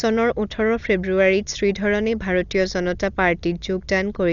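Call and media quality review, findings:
Dull speech throughout with rough flutter; spectrogram shows a hard ceiling at 7 kHz and speckled fill. Likely Dolby Digital compression, fitting a 48 kbps stream; starved lines are dither-filled.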